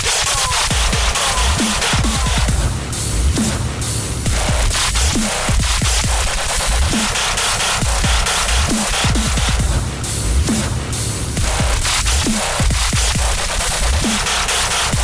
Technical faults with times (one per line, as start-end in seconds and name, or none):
none